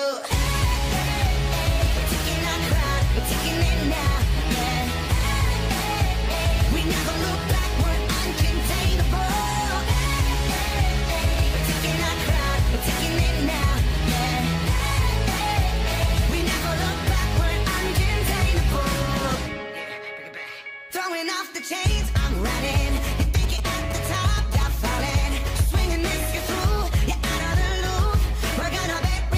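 From 22.5 to 25.57 s, GSM signalling bursts from a nearby phone are rectified by the audio circuit, giving a galloping pattern of brief 217 Hz buzzes roughly 10 dB below the signal. From 25.77 to 28.97 s, a steady GSM phone buzz follows as the phone transmits in bursts 217 times a second during a call: a hard, raspy 217 Hz tone, about 25 dB down.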